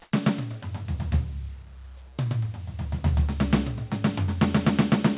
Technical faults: comfort noise in place of the background

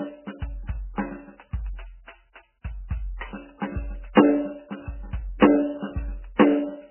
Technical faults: MP3 compression

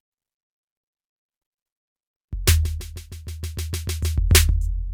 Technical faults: none

